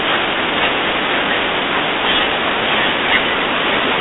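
Throughout, the speech carries a harsh, rasping hiss that tracks its level, confined to a telephone band of 200 Hz to 3.6 kHz with nothing above 3.8 kHz. That is heavy G.726 ADPCM damage: prediction errors coded with very few bits, fitting its 16 kbit/s rate.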